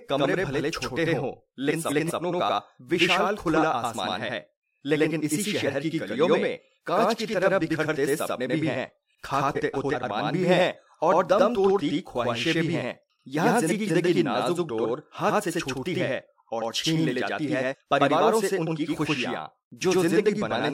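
Throughout the clip, a channel delay (doubling) holds one channel about 92.9 ms behind the other, which fits a 4096-sample buffer. When the two are summed to mono, the late copy lands as a distinct slap at equal level, so every syllable of speech is doubled.

Frames out of order occur at 1.70 to 2.11 s, 9.55 to 9.95 s and 13.68 to 14.09 s. Each time, two neighbouring blocks of about 186 ms were decoded in swapped order. The stretch plays with its halves exchanged, producing a garbled flutter, and no time is lost.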